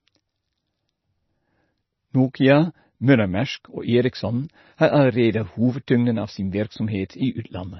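MP3 compression throughout: the speech is likely MP3-coded at a starved bitrate, which fits roughly 24 kbps. It is cut off above 5.9 kHz and has heavy watery, swirling artefacts from weak lines dropping in and out. Pre-echo at 7.09 s, just after "av sin": quantisation noise spread across the transform block leaks about 10 ms ahead of an attack as a brief hiss, softening it.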